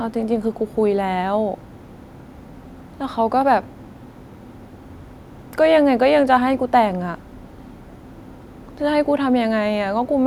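No technical faults are audible.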